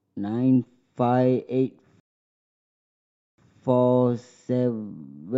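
At 2.00 s the speech halts in a rebuffering stall: playback ran out of downloaded audio and waited, leaving silence until 3.38 s. Unlike a dropout, nothing is skipped. The speech resumes exactly where it stopped, adding 1.38 s to the running time.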